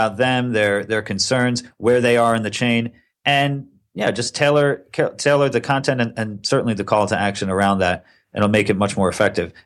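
A recording of speech with no audible technical faults anywhere in the signal.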